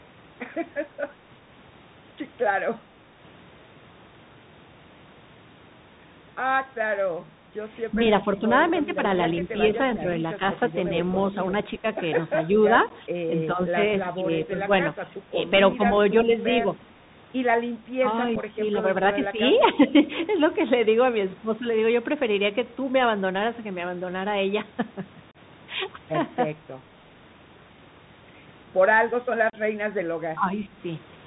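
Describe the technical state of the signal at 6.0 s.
At 6.0 s, as across the whole clip, the Bluetooth CVSD headset codec is audible: one-bit up/down steps that fit a 64 kbps stream leave scratchy sibilants over granular hiss, and nothing above 4 kHz passes.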